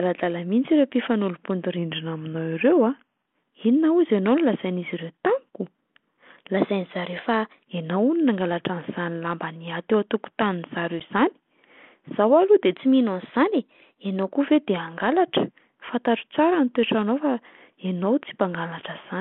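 From 1.78 to 3.27 s the speech slows by about 6% and drops about 110 cents, just over a semitone, then snaps back. This is a drift correction step, likely a clock-matching resampler changing rate at once to rebalance its buffer.

From 6.57 to 7.63 s the opposite step occurs. Speech runs about 6% fast and rises about 103 cents. It then returns abruptly to normal pitch.

From 11.00 to 11.02 s there is packet loss on an ADPCM call. A 10 ms hard-edged gap, about one packet, drops out. The decoder's predictor and step size lose track of the sender. Speech resumes slightly distorted before it settles. The narrow telephone band and light coding hiss fit 32 kbit/s G.726 ADPCM.

From 12.76 to 14.31 s a third drift correction step speeds speech up about 6%. Pitch rises about 103 cents before snapping back.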